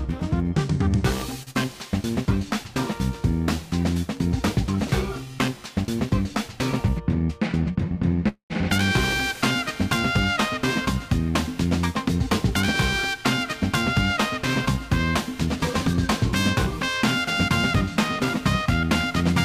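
Running under the whole clip is periodic clock jitter, with the converter clock being wobbled at around 2 kHz. That puts sidebands roughly 2 kHz either side of everything in the sound, and the higher components pick up the strongest ones. You hear it as a grainy, metallic edge riding on anything bright. When the audio drops to silence the edge goes with it, because there's nothing left for the jitter to modulate.

Early on, from 1.43 to 1.50 s, there's a short stall from a late packet. A packet didn't turn up in time, the jitter buffer ran dry, and the receiver held the last bit of sound for about 37 ms until the packet arrived. Playback then carried on from the same spot, so nothing is lost, but everything afterwards sits about 37 ms later. You hear it as a tiny held-over moment with a faint buzzy sustain.

Right after that, from 1.51 to 1.58 s, comes a short concealed packet loss. This time about 40 ms of audio never arrived at all. 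The decoder papered over it with roughly 39 ms of extrapolated sound, continuing the previous pitch or shaped noise, and then crossfaded back into the real signal. The result is a quick smear or wobble.

At 8.28 to 8.53 s there's a call audio freeze. The sound hangs as a fading buzz or hiss, then drops to about 100 ms of silence. It then resumes exactly where it left off, adding about 218 ms of gap with nothing missing. The likely cause is packets held up in the network long enough to empty the jitter buffer, with the receiver filling the wait.

Finally there are two stretches of jitter buffer speed-up, at 13.11 to 14.14 s and 15.46 to 19.34 s. In both, the buffer was holding more than its target, so the receiver kept snipping out pitch-period-sized pieces to catch up. Playback runs at about 103% of normal speed with no change in pitch. That trims roughly 40 ms in the first stretch and around 100 ms in the second.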